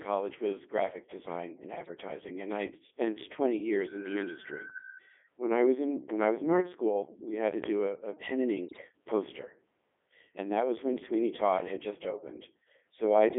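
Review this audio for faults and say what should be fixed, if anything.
The whole speech clip has heavy Codec 2 vocoder damage. The voice is rebuilt from pitch and envelope as buzzy, robotic harmonics confined to 250 Hz to 3.5 kHz, which fits the 3.2 kbit/s mode. A spectrogram shows rigid harmonic combs with nothing above that band. To prevent it, send the speech with a waveform codec or a higher-rate link.

Bit errors on digital voice radio hit twice: at 1.84 to 1.97 s after "was graphic design and", and at 8.67 to 8.82 s after "a pen and". A few percent of flipped bits scramble whole frames into warbling bleeps. Spectrograms show sudden jumps in pitch, level and tone colour. To prevent it, add stronger error protection or keep the radio well inside coverage.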